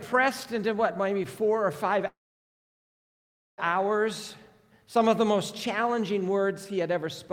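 At 2.07 s the audio stalls in a call audio freeze until 3.60 s: a brief fading continuation of the last sound, then about 1.44 s of silence. Playback resumes where it stopped, now 1.5 s later, likely because delayed packets drained the jitter buffer.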